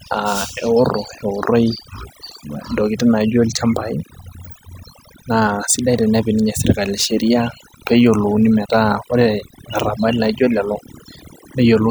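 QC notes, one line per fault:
Throughout: overdone noise removal; the denoiser strips bands near its noise estimate, leaving near-silent gaps with twinkling specks.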